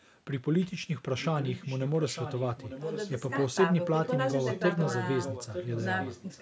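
A faint, delayed second copy of the speech trails the talker from 1.19 to 3.31 s, returns in short scraps at 4.04–4.09 s, 4.38–4.64 s and 4.82–4.94 s, and runs from 5.23 s to the end, lagging about 0.9 s and sitting roughly 10 dB below the direct speech, weaker still near 4.04 s. This is an echo leak: the far side's audio likely came out of a loudspeaker, reached the microphone, and slipped past the echo canceller.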